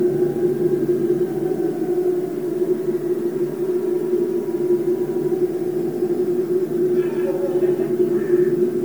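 It's a recording of everyday sounds, and the whole clip carries a doubled audio track. A second copy trails roughly 150 ms behind at about the same level, dry and full-band, so every event gets a slapback twin, likely from a slower second capture path mixed in. There's also generation loss throughout. The sound is swirly and hollow, with smeared attacks and content reaching up to 20.1 kHz. That fits an MP3 at around 126 kbit/s that was likely decoded and re-encoded about five times over.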